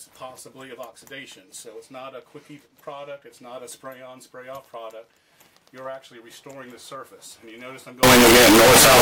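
At 8.03 s the audio suddenly turns into very loud, harsh distortion that runs right to the end, with quiet moments blaring as hard as everything else. That's likely signed and unsigned mixed up: the top bit of 16-bit samples gets flipped, so every zero crossing jumps across the full range.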